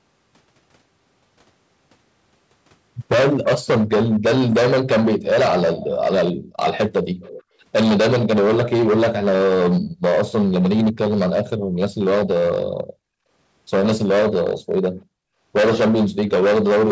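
Hard clipping runs through the whole clip. The speech was driven about 18 dB past what one stage could pass. A large share of the peaks are cut flat. Every loud syllable carries a harsh, buzzing fuzz from the added high harmonics.

At 5.78 to 5.87 s and again at 7.21 to 7.43 s, a faint delayed copy of the speech appears. It trails by 338 ms and sits well below the direct sound. This is likely an echo leak, with the far side's canceller letting loudspeaker sound back through.

The background is gated by the echo canceller five times: 6.33 to 6.45 s, 9.81 to 10.02 s, 11.58 to 11.71 s, 12.72 to 13.15 s and 14.97 to 15.33 s. The room sound drops by up to about 40 dB, and by about 22 dB at 9.81 s. It vanishes briefly, then returns.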